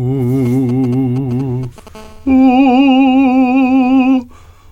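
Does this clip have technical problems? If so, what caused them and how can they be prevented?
Yes. From 0.46 to 1.89 s there are GSM signalling bursts: a 2G phone close to the recording chain was handshaking with its network, firing short clusters of radio pulses that the audio circuitry rectified into the signal path. Over the music this comes through as a galloping dit-dit-dit of short 217 Hz buzzes, sitting around 20 dB below the music. Keeping mobile phones well away from microphones, cables and interfaces, or switched to airplane mode, prevents this.

From 1.95 to 2.86 s a GSM phone buzz follows: a phone on a call transmitted continuously in 217 bursts per second, and the circuitry again demodulated the radio energy into audio. The result is a steady, hard, raspy 217 Hz buzz with many harmonics, unrelated to the music and about 30 dB below it. Shielded balanced cabling and RF-filtered inputs, along with keeping phones out of the setup during recording, prevent it.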